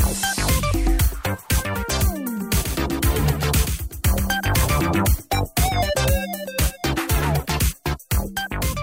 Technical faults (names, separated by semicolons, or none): doubled audio track